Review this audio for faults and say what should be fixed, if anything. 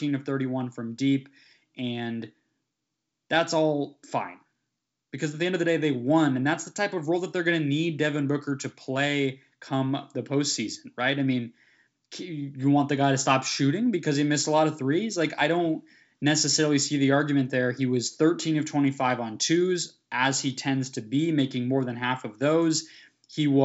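Nothing in this speech recording needs fixing. It has the sound of G.722 wideband telephone coding, which fits the 64 kbit/s mode, with content reaching up to about 7.7 kHz and nothing above that, as that path normally gives.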